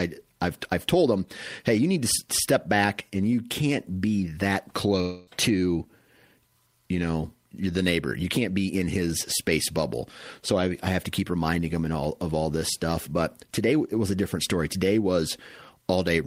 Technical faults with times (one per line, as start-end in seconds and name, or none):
5.01-5.29 long network dropout